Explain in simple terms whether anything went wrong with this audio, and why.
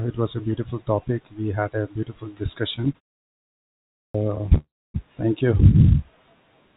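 Yes, a few things went wrong. From 2.76 to 4.58 s there are repeated stalls (stutter): 34 tiny hiccups, none longer than about 0.1 s, where late-arriving audio was patched by stretching the last sound. About a quarter of that stretch is patched, so it drags but loses nothing.

At 3.99 s, after a pause of about a second, there's a clipped start after a pause. The playback side was asleep and swallowed the first 0.15 s or so, so the sound comes in abruptly.

Right after that, from 4.58 to 4.96 s, there's a call audio freeze. The audio hangs for about 0.36 s, mostly silent, likely because the data was held up in transit. It then picks up where it stopped, adding a gap without dropping anything.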